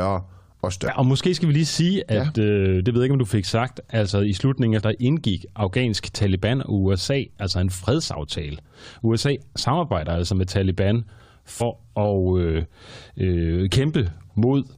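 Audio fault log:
0.87–0.89 s, 4.80–4.82 s and 11.60 s: damaged data in a compressed stream. Each is a brief blip, heard just before "og måske skal vi" and between "altså i slutningen af" and "indgik afghansk". Corrupted bytes make the decoder misread frames and lose sync.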